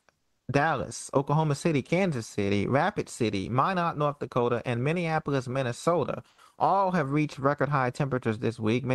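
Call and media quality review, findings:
Comfort noise in place of the background, 6.29–6.38 s (90 ms), just before "all have reached record": flat, featureless hiss about 5 dB quieter. Spectrogram shows smooth, detail-free floor. Likely Opus DTX: sender paused, receiver synthesised noise.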